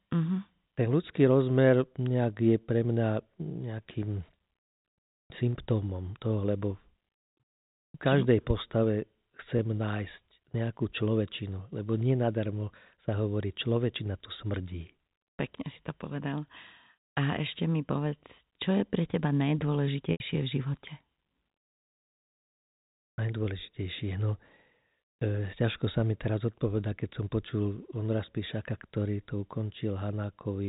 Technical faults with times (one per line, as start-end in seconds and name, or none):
9.58 packet loss with pitch repetition
20.12-20.20 packet loss with pitch repetition